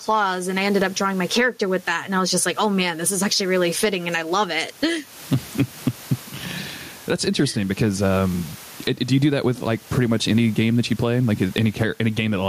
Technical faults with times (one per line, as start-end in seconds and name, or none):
0.00-12.48 gain pumping